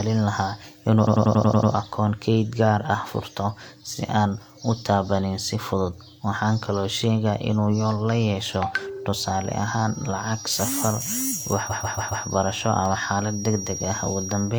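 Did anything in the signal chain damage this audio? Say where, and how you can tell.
Yes. Repeated frames at 1.03–1.68 s, 8.92–8.98 s and 11.66–12.22 s: compressed blocks of about 93, 46 and 139 ms replay in stutters. The storage or codec stage wrote them repeatedly.

Feedback whistle from 9.08 s to the end: a 5.7 kHz tone about 15 dB below the sound, likely from a loudspeaker-to-microphone loop hovering at feedback.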